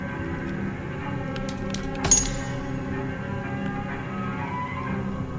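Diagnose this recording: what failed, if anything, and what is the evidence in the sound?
Nothing in the signal chain points to a failure: no stage from analogue wiring through converter, buffer, processing, codec, network, storage or playback leaves an audible fault here.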